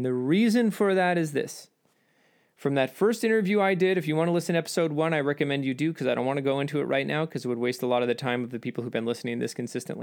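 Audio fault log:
No faults can be heard anywhere in the speech. There is nothing here to log.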